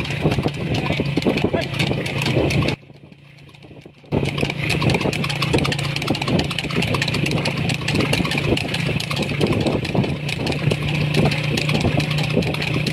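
One channel inverted, from 2.74 to 4.12 s: the sound drops by about 22 dB to a faint remnant, then returns. The likely cause is one stereo channel with reversed polarity, so content common to both channels cancels when they are summed to mono.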